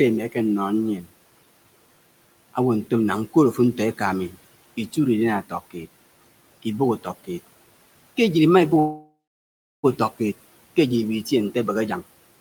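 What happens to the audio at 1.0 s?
From 0.96 to 1.1 s the speech turns faint and swallowed, dipping by about 17 dB. This is speech cut by the noise suppressor, which mistook that stretch for background noise and pulled it down.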